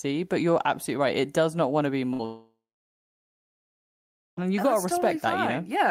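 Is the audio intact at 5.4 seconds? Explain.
Yes, at 5.4 s the speech plays through intact, with no dropout, click, distortion or other fault audible at that moment.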